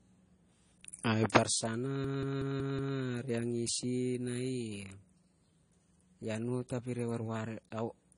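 Transcoding between lossy codecs runs through the whole speech clip. Nothing is present above 10 kHz, and two different kinds of coding damage sit on top of each other: smeared, warbly detail alongside a second layer of swirly artefacts. The likely cause is a low-rate MP3 pass, around 40 kbit/s, re-encoded as AAC-LC at around 32 kbit/s. The second encoder wasted bits on the first one's errors and added its own, and the lower cut-off survived.

A system hang loop occurs from 2.04 to 2.97 s. The same 185.8 ms slice of sound repeats exactly five times at about 5.38 Hz. This produces a rapid, machine-gun stutter rather than a buzz. The loop length fits an 8192-sample buffer that the sound hardware kept replaying while the system froze. Essentially no audio is lost, and playback resumes where it stalled.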